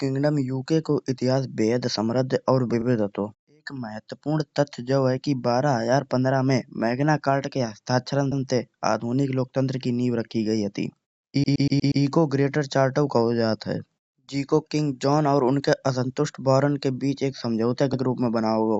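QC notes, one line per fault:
2.81–2.86 s, repeated frames: a 40 ms block, which fits two 20 ms compressed frames, plays twice, adding 40 ms and a brief stutter.
8.31–8.43 s, repeated frames: a 120 ms block replays once, adding 120 ms, so the same sliver of speech is heard back to back.
11.43–12.03 s, repeated frames: a 120 ms block plays six times in a row, adding 0.6 s, a looping stutter.
17.93–18.01 s, repeated frames: an 80 ms block is decoded twice, adding 80 ms, heard as a short hiccup.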